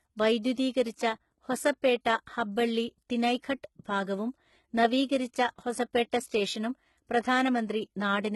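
Throughout the speech, the treble sounds gritty and metallic and s sounds come out lispy, likely from heavy HE-AAC compression rebuilding the highs from copied lower bands, which suggests a bitrate around 16 kbps. At 6.11 s, a brief hiss runs ahead of a sharp attack and softens it. This is pre-echo: the codec spread its block noise into the quiet moment before the transient.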